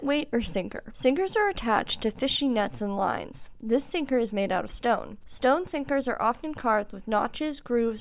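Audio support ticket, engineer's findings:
No audible faults found; the signal stays continuous and stable throughout, with nothing to trace to any component.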